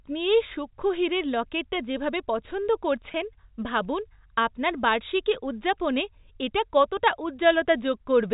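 At 3.12 to 3.14 s, between "হীরের লকেটটা যেভাবে পছন্দ" and "ভাবুন আপনার বার্ষিকী উদযাপনে", there is packet loss with pitch repetition. About 20 ms of audio went missing, which fits two lost 10 ms packets. The receiver filled the hole by repeating the last pitch period. The gap is short, so there is no fade to silence. It sounds like a brief held, slightly buzzy tone. The line's G.711 telephone band carries it cleanly.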